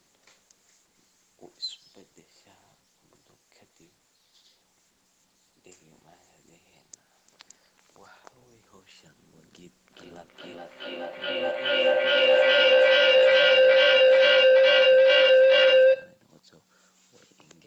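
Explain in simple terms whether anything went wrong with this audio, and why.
Something went wrong. From 9.9 to 16.5 seconds there is feedback howl. Two devices in one room shared the call. Sound looped from speaker to microphone and grew louder on each trip into a tone near 500 Hz. It pulses about every 0.4 seconds and becomes far louder than the speech.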